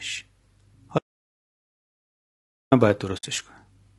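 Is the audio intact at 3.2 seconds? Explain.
No. From 3.17 to 3.24 s there is AAC frame loss with muting: the decoder zeroed the missing data, which fits about three lost frames. The overlapping windows taper the sound out and back in, leaving a soft-edged silent hole. On a waveform the envelope narrows smoothly to a flat line; a spectrogram shows a clean blank vertical band.

The surrounding sound is also rough and grainy, with noise filling the gaps between harmonics and a lowered or synthetic-sounding top band. The likely cause is low-delay AAC compression (AAC-ELD) at a low bitrate, around 32 kbps. A spectrogram shows smeared harmonics and a speckled, patchy upper range.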